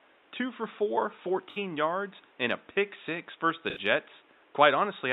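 At 1.50 s and again at 3.70 s, AAC frame loss with concealment occurs: about 64 ms of encoded audio goes missing each time, which fits three lost frames. The decoder rebuilds each gap from the previous spectrum, leaving a smeared, noisy, phasey patch in the speech.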